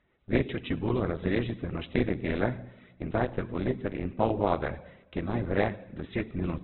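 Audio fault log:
throughout: likely Opus compression. The speech is band-limited, with nothing above 4.4 kHz. Voiced sounds turn rough, grainy and noisy rather than swirling. The encoder fills starved bands with folded or noise content. The heavy damage fits a rate near 8 kbps.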